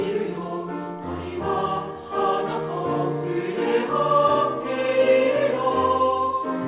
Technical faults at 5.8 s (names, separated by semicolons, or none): none